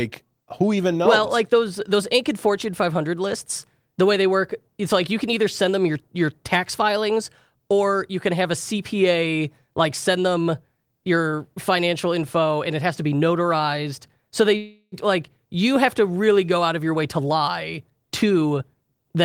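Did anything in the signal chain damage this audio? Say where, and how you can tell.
Yes. Network stage: a call audio freeze at 14.57 to 14.94 s, likely from delayed packets. A fading buzz fills 0.35 s before "like you have to" resumes intact.

Jitter buffer stage: a jitter buffer speed-up from 16.62 to 19.04 s, after "have to really go". Pitch-period trims run speech at 114% speed, same pitch, removing roughly 0.4 s.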